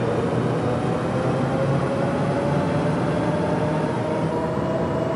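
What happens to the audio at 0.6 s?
Nothing goes wrong at 0.6 s; the audio runs through that moment intact, with no dropout, click or distortion.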